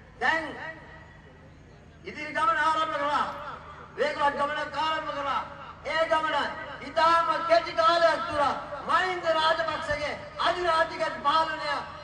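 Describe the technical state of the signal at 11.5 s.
At 11.5 s the signal is intact, with no dropout, distortion, glitch or other technical fault to be heard.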